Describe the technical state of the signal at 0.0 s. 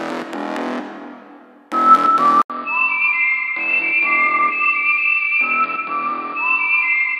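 At 0.0 s the signal is intact, with no audible technical fault at that moment.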